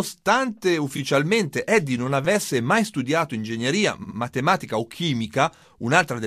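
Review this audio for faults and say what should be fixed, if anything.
Repeated frames occur at 0.96–0.98 s, 2.25 s, 4.03–4.17 s and 5.56–5.61 s. The decoder replays a stretch of the stream: a 23.2 ms block once, then 5.8 ms, 69.7 ms and 16.0 ms blocks each twice. This causes audible stutters in the speech and lengthens it. Fix the encoding or transport stage so that each compressed frame is written and delivered exactly once.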